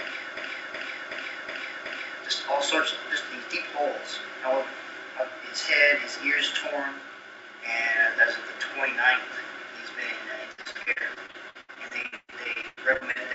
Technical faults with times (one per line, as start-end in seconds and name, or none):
0.37-2.23 system hang loop
10.52-13.34 repeated packet loss (robotic sound)